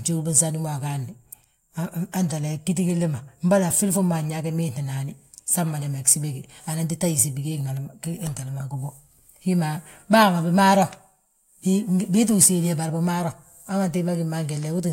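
No technical faults can be heard anywhere in the recording; the signal stays continuous and steady throughout.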